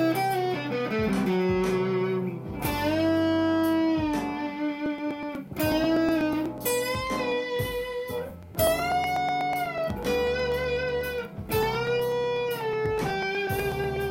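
Periodic USB or driver dropouts run from 4.86 s to 13.96 s, one every 0.123 s, about eight per second. Each time the audio path stalls and a couple of milliseconds are skipped outright, leaving a steady train of small ticks wherever sound is present.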